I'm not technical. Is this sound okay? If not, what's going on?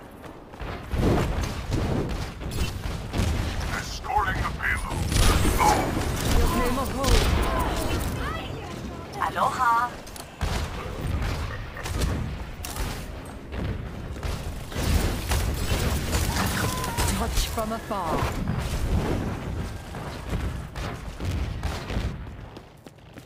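No. Throughout the clip there is sample clock jitter: the converter's timing wobbles by roughly 7 millionths of a second, so each sample lands slightly off. That adds a gritty hiss that grows on loud, bright, fast-changing passages and disappears in silence.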